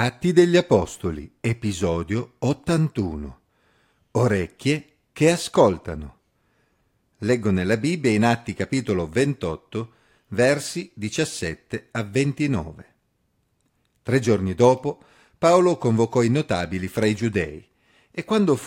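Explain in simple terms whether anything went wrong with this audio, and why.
Nothing stood out as wrong when listening to this speech recording.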